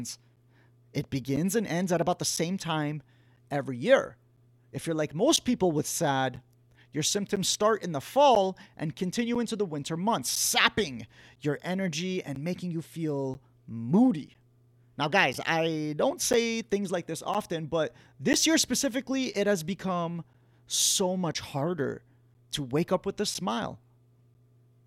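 From 0.36 s through 24.35 s there are periodic USB or driver dropouts: once every second, something stalls the audio path and around 10 ms of speech becomes silence. You hear it as a steady tick or pop, only where the speech is actually sounding.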